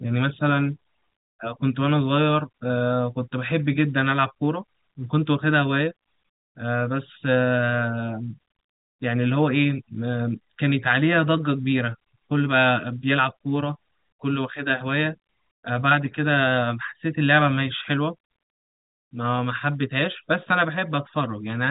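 Nothing in this speech clip stands out as a fault, just the ordinary G.711 telephone coding you'd expect on a phone line, with the sound stopping short of about 3.8 kHz.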